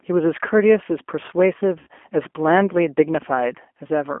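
Throughout the speech, the G.729 codec is plainly audible. The line band runs from about 250 Hz to 3.4 kHz, and the coarse pulse-based excitation makes the sound rough and synthetic. Plain band-limiting would only sound muffled.

From 1.79 to 1.87 s, VoIP packet loss concealed by the speech codec replaces about 80 ms of audio, which fits four lost 20 ms packets. The decoder repeats its last pitch and filter and lowers the gain, so the sound turns into a buzzy tone or coloured noise that fades. A plain dropout would leave silence or a click instead.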